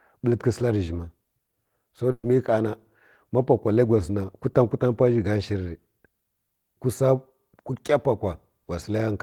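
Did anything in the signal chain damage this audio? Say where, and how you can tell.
Yes. There is a burst of packet loss from 2.11 to 2.25 s, a network-stage fault in this speech. For about 120 ms the receiver's concealment holds and repeats the last sound it received, fading it down, followed by roughly 20 ms of near-silence. The speech then resumes further along, because about 120 ms of the original audio was lost or arrived too late and was skipped rather than delayed.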